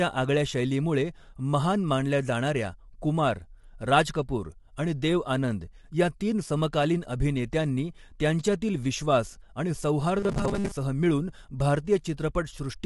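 Throughout the clip, the speech was likely squeezed through low-delay AAC compression of the AAC-ELD kind used for video calls, at a rate that fits roughly 32 kbps. At such a low bitrate too few bits are left for the fine detail, so the damage is plainly audible: the voice sounds rough and grainy, with noise filling the gaps between harmonics, and the spectrum stops dead at about 11.6 kHz, leaving the top band dull.

From 10.20 to 10.71 s, right after "अभिनेत्यांनी त्यांच्यातील विश्वास आणि", fresh audio stopped arriving in time and playback likely kept re-sending one short buffer, covering most of that half-second with repeats while the real audio was skipped. The loop repeats every 5 ms, consistent with a very short buffer, stamping a fixed 200 Hz pitch onto the voice. The result is robotic sound from repeated short buffers: a rigid, metallic buzz that only loosely tracks the speech.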